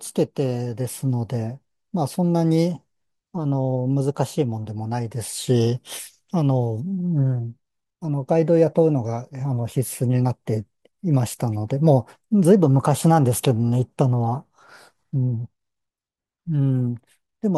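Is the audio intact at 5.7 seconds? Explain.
Yes, the audio is intact at 5.7 seconds, with no dropout, click, distortion or other fault heard at that point in the speech.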